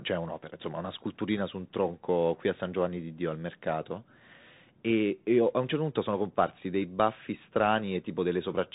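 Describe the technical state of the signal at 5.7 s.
At 5.7 s, as throughout, Bluetooth CVSD headset codec damage: one-bit adaptive slope coding leaves a hard spectrogram ceiling at 3.8 kHz, scratchy sibilants and granular hiss.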